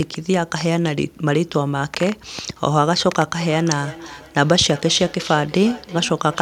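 At 2.39 s there's a loud pop, actually two quick ones by 2.52 s, jumping something like ten decibels above the speech, which carries on underneath. That's a sudden voltage pulse hitting the signal, likely from a plug, switch, static discharge or driver glitch.

From 3.39 s to the end you get feedback echo between two devices: two devices in one room share a call, one plays back what the other's mic sent, and that mic picks it up again. The speech comes back about every 0.4 s, peaking around 18 dB below the direct sound.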